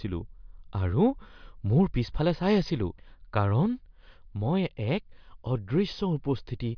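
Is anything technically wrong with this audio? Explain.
No, the speech signal shows no audible technical faults anywhere in the clip.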